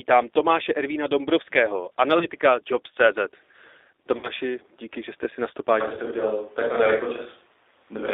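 Speech that sounds slightly rough and synthetic throughout, confined to a narrow telephone band of roughly 300 Hz to 3.7 kHz, is the mark of the G.729 codec at 8 kbit/s, which rebuilds each 10 ms frame from a vocal tract filter, a pitch predictor and a handful of pulses. At 2.19–2.28 s, at 4.17–4.29 s just before "díky že jste si", and at 5.95–5.99 s just after "jste si na stopáž", the sound smears into a buzzy tone or a coloured noise that fades. This is VoIP packet loss concealed by the speech codec. About 20, 60 and 20 ms of audio went missing, and the decoder stretched its last frame to fill each gap, then took a little longer to recover. From 5.82 s to the end, after "jste si na stopáž", the voice turns suddenly roomy and hollow with thinner bass, at much the same level, with faint room noise well below it. This most likely comes from a switch to a distant microphone.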